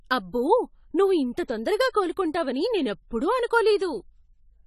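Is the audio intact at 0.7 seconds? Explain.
No. At 0.7 seconds, as across the whole clip, the speech shows AAC compression, likely from an AAC-LC encoder starved of bits. Its damage is consistent with a rate around 32 kbps. With so few bits, the encoder quantises each frame's spectral lines coarsely, discarding high bands and leaving gaps elsewhere. Nothing survives above 14 kHz, so the speech sounds dull and smeared, with plainly audible warbling and fizz on sibilants and sustained sounds.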